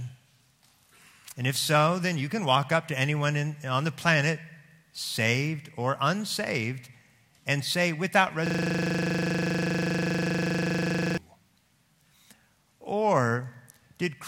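From 8.47 to 11.18 s the sound locks into a rapid, mechanical rattle: one 40 ms fragment repeats exactly, dozens of times, at 25 Hz. This is a system hang loop. The computer or driver stalled while the audio hardware kept replaying the same ring buffer, which fits a buffer of about 40 ms.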